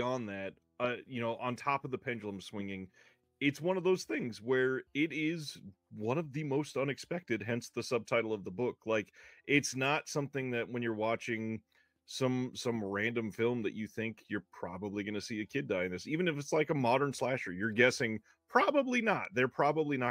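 No technical faults are audible anywhere in the recording.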